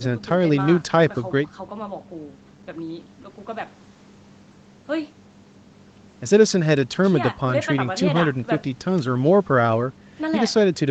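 No technical faults can be heard anywhere in this recording.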